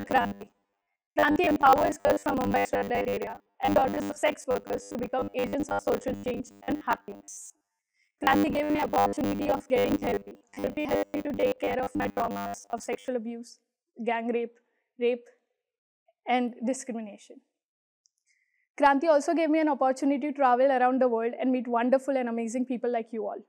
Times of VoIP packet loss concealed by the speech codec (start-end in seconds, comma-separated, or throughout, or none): none